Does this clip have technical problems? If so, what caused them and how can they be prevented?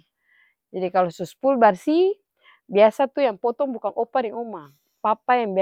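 No, there's nothing technically wrong to hear in this bit of speech, so there's nothing to fix or guard against here.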